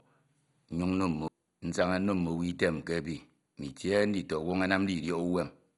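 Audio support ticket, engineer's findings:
Speech dull, no content above 11.2 kHz, throughout. Gurgling, granular texture; upper bands flicker in and out. Likely MP2 compression at a low bitrate, roughly 56 kbps. Too few bits per sub-band, so upper bands drop out and remaining ones quantise coarsely. Heavy damage.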